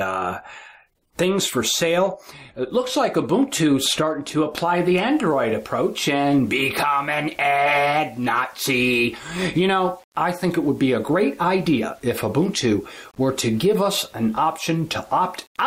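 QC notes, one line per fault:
4.61 s to end: low bit depth without dither. Grainy distortion follows the signal, with error around 35 dB below it, so quiet passages turn gritty. Likely cause is undithered rounding to about 7 bits, so the error tracks the waveform.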